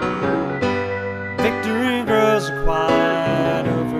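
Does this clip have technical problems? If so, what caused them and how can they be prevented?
No, no technical problems here.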